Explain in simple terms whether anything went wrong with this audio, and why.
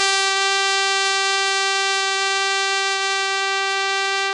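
Yes, something went wrong, and the likely cause is heavy AAC compression applied to the whole piece of music, start to finish. To shrink the file, the encoder threw away detail it judged you wouldn't miss. It dropped everything above about 9.8 kHz and coded the rest coarsely. As a result, the music sounds dull and muffled, without its usual sparkle, and held sounds take on a smeared, warbling or fizzy quality.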